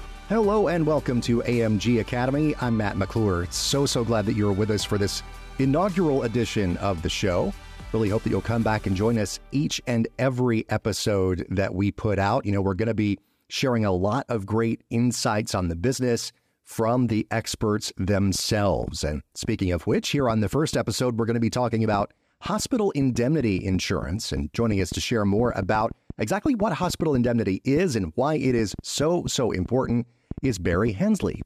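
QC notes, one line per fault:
18.35–31.43 s, train of clicks: from here to the end there's a steady scatter of ticks, around 70 of them at roughly 4.6 per second but on an uneven beat, all with much the same sharp shape and poking a few decibels above the sound itself, so they stay audible in the gaps too. That sameness and persistence points to likely outside interference or a struggling interface injecting pulses.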